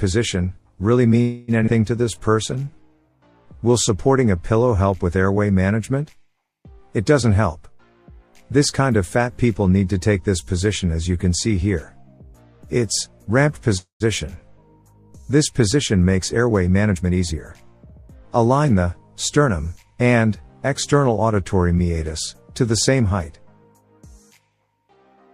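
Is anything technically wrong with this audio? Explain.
Yes, the clip has five faults, all tied to late or uneven packet delivery.

Call audio freeze at 1.21 to 1.51 s and 13.77 to 14.03 s, likely from held-up packets draining the jitter buffer. The last sound is stretched into a fading buzz for about 0.27 s and 0.23 s, the second ending in 120 ms of silence, before the audio resumes where it stopped.

Skip ahead at 1.66 to 1.70 s. Roughly a tenth of a second was discarded, so playback jumps forward with a near-direct join.

Jitter buffer slow-down from 2.05 to 3.10 s. Repeated pitch periods add 119 ms, so the audio runs at 89% speed with unchanged pitch and sounds drawn out.

Jitter buffer speed-up from 16.18 to 19.50 s. Short pieces totalling about 0.2 s are removed, so the audio runs at 107% speed with the same pitch and sounds hurried.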